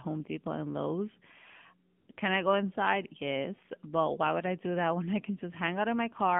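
Throughout, the speech has been squeezed through the AMR narrowband mobile codec, which fits a rate near 7.4 kbps: it is confined to 150 Hz–3.5 kHz and sounds plainly buzzy and synthetic. At 2.00–2.08 s and 2.12–2.18 s, speech frames stopped, and AMR comfort noise replaces the real sound with brief patches of smooth synthetic noise.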